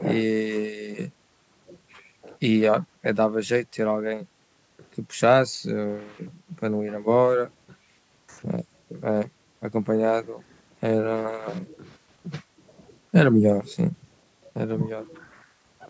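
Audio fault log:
Nothing wrong turns up in this speech recording, just the usual call microphone processing trimming the deepest bass and leaving nothing above 8 kHz.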